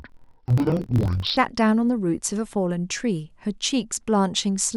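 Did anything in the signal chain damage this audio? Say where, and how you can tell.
Yes. The damage sits at the sample-format or buffer stage. From 0.0 to 1.38 s the speech drops an octave, sounds doubled and choppy, and flutters at about 42 Hz. That is interleaved audio read as planar. Each 24 ms block's alternating samples were split into halves, playing both at half speed.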